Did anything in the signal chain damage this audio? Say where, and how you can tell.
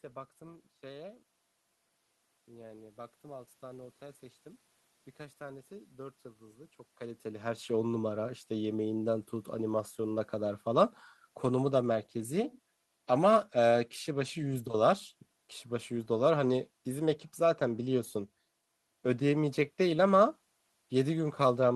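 No, nothing in the signal chain stood out on listening; the room noise belongs to the recording, and the level change around 7 seconds sounds like the talker shifting position at the microphone.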